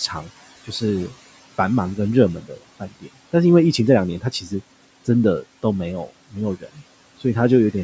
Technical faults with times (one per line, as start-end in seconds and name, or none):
0.00-7.83 noise suppressor artifacts
2.41-3.08 speech cut by the noise suppressor
4.21-4.52 speech cut by the noise suppressor
6.60-6.82 speech cut by the noise suppressor